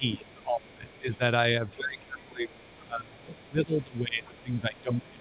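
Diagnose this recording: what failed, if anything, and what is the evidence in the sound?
Call processing is the stage at fault. The echo canceller's double-talk handling likely mistook the talker for loudspeaker echo while both sides spoke, and attenuated the near-end speech. From the start to 1.22 s the speech dips by up to about 20 dB, and from 1.72 s to the end it is pulled down again, by as much as about 25 dB. The result is a talker who fades and drops out in pieces rather than holding a steady level.

The same echo canceller also likely failed to remove all of the far end's loudspeaker signal from the microphone. A second, faint voice, around 30 dB below the main speech, leaks through from 0.12 to 1.17 s, briefly at 1.70 to 1.75 s, from 2.20 to 2.81 s, and from 3.26 s to the end. It sits under the talker as a band-limited presence. Like everything on this narrowband path, it carries nothing above 4 kHz.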